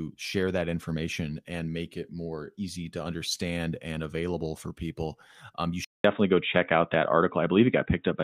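From 5.84 s, after a 200 ms gap, the speech turns dull and boxy with nothing above 3.8 kHz, likely an input switched to a poorer device.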